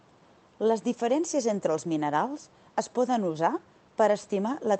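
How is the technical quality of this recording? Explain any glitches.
Nothing faulty is audible anywhere in the recording, so there are no glitches to explain.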